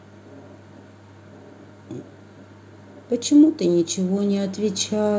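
A speech clip that runs through a call path, so nothing comes through above 8 kHz, which fits a G.722 codec at 64 kbps. The real problem is automatic gain rising from 3.57 s to the end: the gain control decided the input was too quiet and kept turning it up, so voice and background swell together.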